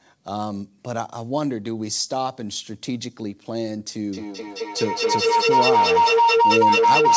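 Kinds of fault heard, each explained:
Feedback howl: from 4.13 s a microphone-to-loudspeaker loop gains on each pass, narrowing to a tone near 1 kHz that pulses roughly five times a second and climbs to about 9 dB above the speech. Unlike echo, these repeats grow instead of fading.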